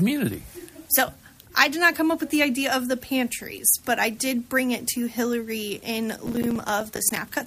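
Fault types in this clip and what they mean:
Processor overload crackle: near the end, from about 6.22 to 7.17 s, the sound picks up a gritty, tearing crackle. The processor can't finish its tiny audio buffers on time, and the misses come one after another. Each one drops out as a short gap of silence with hard edges. The spacing fits buffers of around 5 ms, and roughly thirty of those misses pile up into that rough burst before the load eases.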